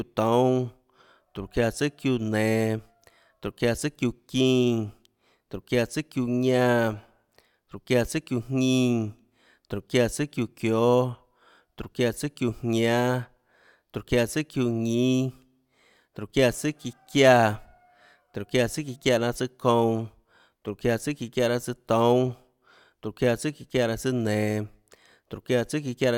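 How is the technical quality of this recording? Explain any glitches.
Nothing technical stands out in this recording; the speech comes through steady and unbroken, with no glitches to explain.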